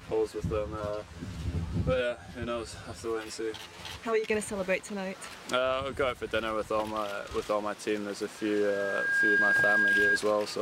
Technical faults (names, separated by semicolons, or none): channel delay (comb filtering); loudspeaker feedback squeal